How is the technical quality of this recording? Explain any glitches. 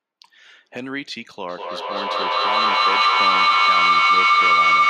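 Poor: from 1.48 s to the end of the speech clip a feedback howl takes over. A tone near 1 kHz swells out of the audio, the loop repeating roughly every fifth of a second, and peaks about 15 dB above the speech. It comes from a loop: a loudspeaker in the room feeds the microphone, and each pass round gains level, so the repeats grow rather than die away, narrowing onto the frequency the loop favours. Nothing breaks the loop, so it never stops.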